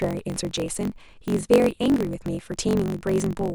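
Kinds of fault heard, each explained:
Block size mismatch (truncated): one stage writes longer blocks than the next reads, so each block's tail gets chopped off. You hear a steady 46.9 Hz buzz all the way through, which fits a 1024-sample read, and the speech runs 1.12 times fast with its timbre kept.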